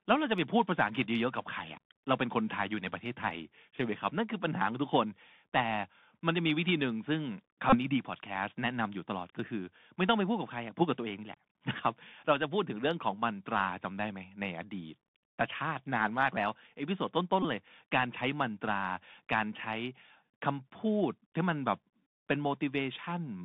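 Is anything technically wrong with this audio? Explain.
Yes. The speech has gone through a Bluetooth CVSD headset codec for its whole length, and there are two short Bluetooth headset packet repeats.

The CVSD codec runs at 64 kbps, one bit per sample stating only whether the waveform steps up or down, with an adaptive step size. The line passes roughly 150 Hz to 3.6 kHz, so nothing of the upper band survives. The coding damage is plainly audible: s sounds turn scratchy, loud bright passages distort where the step cannot keep up, and a granular hiss sits under the speech. A plain telephone band-limit would be dull but clean. This grainy, slope-limited texture is what points to delta modulation.

The packet repeats fall at 7.70 to 7.78 s and at 17.43 to 17.45 s. In each, voice packets between headset and phone were lost, and the chip decoded the previous packet's bits again instead of leaving a gap. 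The first loss covers about 26 ms, which fits a run of about seven 3.75 ms packets. The second covers about 19 ms, about five packets. Repeating every 3.75 ms gives a brief buzzy tone near 267 Hz rather than the silence of a true dropout, and that buzz is what separates it from a gap or a click.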